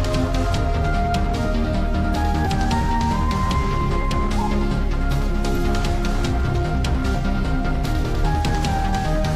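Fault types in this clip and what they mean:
Compressed frames skipped: Missing or rejected compressed frames make the audio jump forward, about a fifth of a second at 2.42 s and half a second at 5.25 s.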